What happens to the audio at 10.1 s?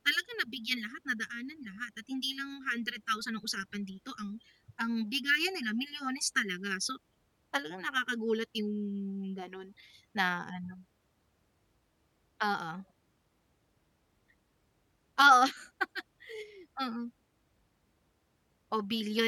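Nothing goes wrong at 10.1 s; the audio there is intact, with no dropout, click, distortion or other fault at that point.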